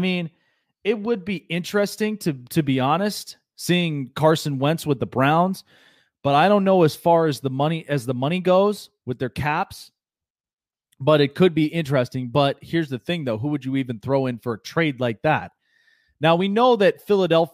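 No technical faults can be heard anywhere in the speech. Nothing points to a problem in how it was captured, processed or played back.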